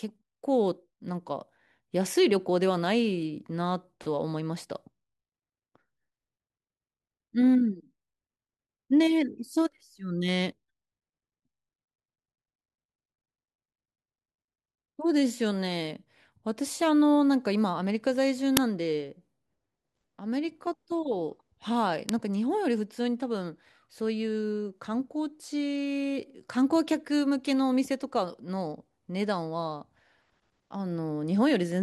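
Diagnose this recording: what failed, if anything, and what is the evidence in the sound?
Uninitialised buffer at the driver stage. Loud cracks hit at 18.57 s and 22.09 s. They fit 256- and 128-sample blocks played before being filled.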